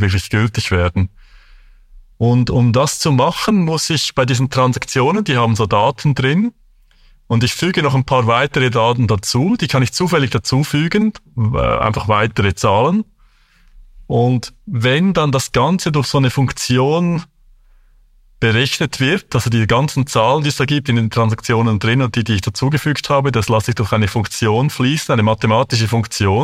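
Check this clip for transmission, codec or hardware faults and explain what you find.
Nothing turns up here at all: the speech comes through steady and intact, with no transmission, codec or hardware trouble to point to.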